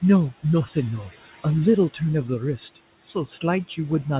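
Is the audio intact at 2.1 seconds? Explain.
No. Noise suppressor artifacts run through the whole clip, so they are present at 2.1 s too. The suppressor judges, frame by frame, which frequency bands hold steady background noise and pulls those down by about 15 dB. The room noise therefore dips in the gaps between speech and returns underneath it. The narrow band with nothing above 4 kHz fits a G.711 call path.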